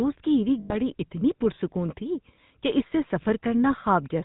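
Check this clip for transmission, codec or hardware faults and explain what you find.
Two faults are present, one lasting the whole clip and one brief dropout.

Throughout, the speech carries GSM full-rate codec damage: pulse-driven vocal-tract coding at roughly 13 kbps leaves a buzzy, gravelly roughness, and the spectrogram shows nothing above 4 kHz.

From 0.6 to 0.74 s, lost GSM frames appear. The decoder repeated the last good frame for about 100 ms, consistent with five 20 ms frames. This produces a metallic ring that shows as smeared, repeated bands.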